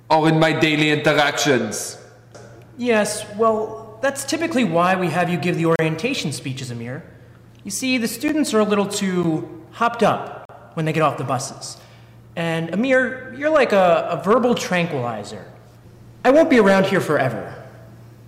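The audio is hard clipped throughout, driven about 6 dB past what the signal path could pass. Only a small fraction of samples hit the ceiling, so the flattened tops appear as crackle on the loudest peaks rather than a constant fuzz. What separates this from soft saturation or tape-style compression is the abruptness. The waveform is sheared off square, producing bright, gritty harmonics high in the spectrum instead of a gradual thickening of the tone. There are also four blocks of digital silence: a 33 ms hole from 5.76 to 5.79 s, brief 10 ms dropouts at 8.28 s and 9.23 s, and a 40 ms gap from 10.45 to 10.49 s. Each is a stretch of silence, most plausibly output buffers that went unfilled in time. The sound stops dead and resumes with no fade. The two 10 ms events register as ticks, while the longer two open into audible holes. Unlike packet-loss concealment or a deliberate edit, nothing is smoothed or filled in, and the signal simply drops to silence and snaps back.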